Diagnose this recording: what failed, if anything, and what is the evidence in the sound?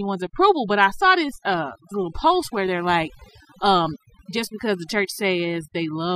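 Overdone noise removal in the processing stage, present throughout the speech: the background drops and breaks up into twinkling specks. The suppressor is set too hard, switching off bands near its noise estimate and taking quieter speech detail with them.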